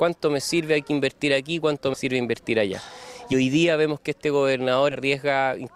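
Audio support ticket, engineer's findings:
Compressed frames skipped in decoder: damaged or missing frames dropped, so the sound jumps ahead at 1.93–1.98 s, 3.32–3.34 s and 4.91–4.95 s, skips fitting 10 ms frames.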